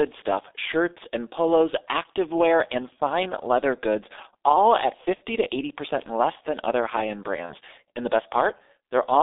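Throughout, the G.723.1 codec squeezes speech into a 300 Hz to 3.7 kHz line band, with a heavy, hoarse, muffled smear consistent with roughly 6.3 kbit/s, unlike plain band-limiting, which stays clean. VoIP packet loss concealed by the speech codec appears at 5.15 to 5.22 s, after "leather goods all at", fitting two lost 30 ms frames, and at 7.46 to 7.55 s, after "than other high end", fitting one. Each time, the decoder stretches the last sound into a fading buzzy tone or coloured noise instead of a silent dropout.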